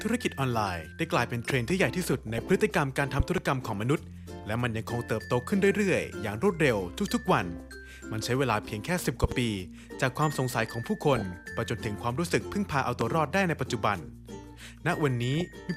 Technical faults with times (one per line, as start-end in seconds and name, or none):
1.50-1.72 loud pop
2.00-2.48 DAB burbling
3.20-3.40 loud pop
7.57-7.60 DAB burbling
9.24-9.34 loud pop
11.16-11.38 DAB burbling
13.01-13.04 loud pop
15.35-15.53 DAB burbling